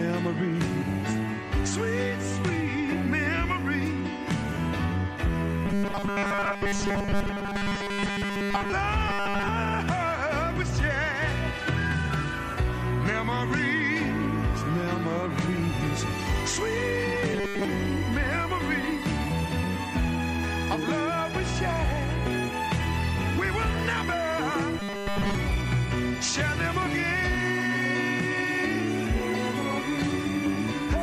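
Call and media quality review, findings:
Rigid metallic buzz at 200 Hz, 5.66–8.72 s, 9.09–9.48 s (fully replaced), 17.33–17.65 s, 24.80–25.35 s. Robotic sound from repeated short buffers. Likely starved playback looping a 5 ms block, skipping most real audio.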